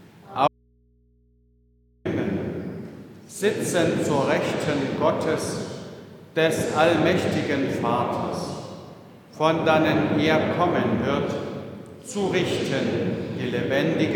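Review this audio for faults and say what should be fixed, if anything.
There's an audio dropout to a faint residue from 0.48 s to 2.05 s, so about 1.6 s of the signal just vanishes. It cuts out abruptly, not like a pause or fade, and what's left is mains hum sitting roughly 40 dB under the normal level until the sound snaps back. The likely cause is the source disconnecting upstream while the input stayed live and picked up hum from the open line. To prevent it, secure and check the cabling and connections at the source before recording.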